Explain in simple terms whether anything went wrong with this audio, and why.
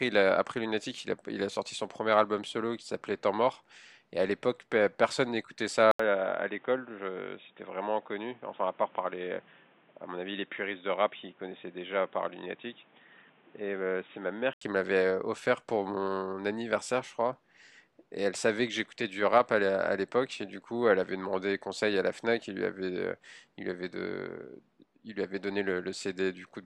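From 5.91 to 14.61 s the speech turns dull and boxy, with nothing above 3.8 kHz, a bit quieter, with new background noise and a brief 80 ms gap at the switch. This is likely an input switched to a poorer device, such as another microphone.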